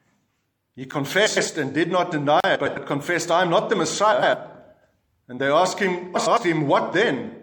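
Blocks of digital silence occur at 0.91 s as a click-like tick of about 10 ms, and from 2.40 to 2.44 s as a short hole, where the sound cut out abruptly. Frames out of order appear at 1.26 to 1.48, 2.55 to 2.77, 4.12 to 4.34 and 6.16 to 6.38 s. Each time, two adjacent runs of about 104 ms play swapped, fitting four frames each, giving a garbled flutter. Throughout, the audio sounds watery and swirly with smeared attacks, a plainly audible result of MP3 compression, likely at a low bitrate around 64 kbps.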